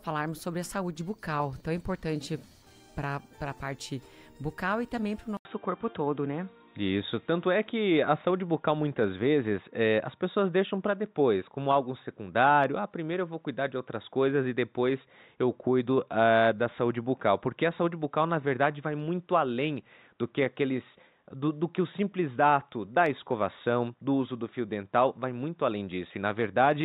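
Input switched to a poorer device at 5.37 s, and the change lasts to the end of the clip. After a brief gap of about 80 ms, the audio loses everything above 3.8 kHz and turns dull and boxy, with a faint new background noise sitting roughly 55 dB down. The loudness stays about the same. The likely cause is the system moving its input to another microphone or a headset's narrower call profile partway through recording.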